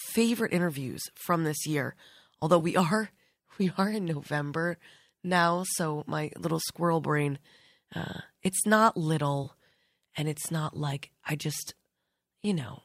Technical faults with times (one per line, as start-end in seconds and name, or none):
2.59-2.62 AAC frame loss with concealment
9.43-9.47 AAC frame loss with concealment